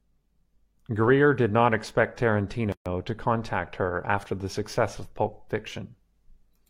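At 2.72 s there's a gap at a join of encoded pieces: a roughly 135 ms hole where untrimmed encoder delay and padding sit, then the speech resumes.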